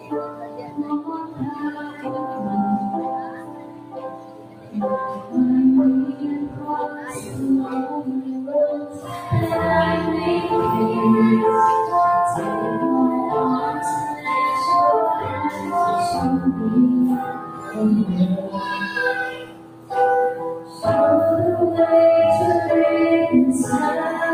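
Throughout, the audio pumps and thins as held sound and decays sink while attacks punch through, with swings of around 15 dB, because a noise suppressor meant for speech was left on. Steady sound is cut by the noise suppressor and dips by about 7 to 11 dB at 0.0–2.46 s, 2.98–4.75 s, 5.06–5.34 s, 6.09–9.18 s, 15.51–15.68 s, 17.25–17.77 s, 19.31–19.91 s and 20.55–20.83 s, as it mistakes that sustained energy for noise.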